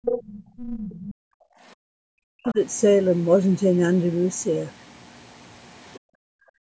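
A speech recording from a call, with band-limited content that stops at 8 kHz after the call's microphone processing, showing three kinds of echo-canceller trouble. The other side's voice leaking through appears first from 0.04 to 0.38 s, nearly as loud as the talker, then from 0.57 to 1.14 s well below the talker, and again in brief faint scraps at 2.45 to 2.54 s and 5.93 to 5.99 s. This is likely far-end loudspeaker sound the canceller left in the microphone signal. On a spectrogram it shows as a second harmonic pattern overlaid on or sitting between the talker's own bands. Background gated by the echo canceller follows the leaks. The room sound drops by about 22 dB from 0.21 to 0.57 s, by about 40 dB from 1.14 to 1.63 s, and by about 40 dB again from 5.99 s to the end. Each time the canceller clamps the microphone while the loudspeaker is active. A waveform shows the noise floor dropping sharply in those spans, and a spectrogram shows the steady background texture going dark across all frequencies. 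Speech suppressed in double talk occurs from 1.91 to 2.57 s, where the talker's voice dips deeply, by up to around 40 dB. The likely cause is both sides speaking at once, so the canceller turned down the near talker along with the echo. The waveform envelope sinks deeply across that span.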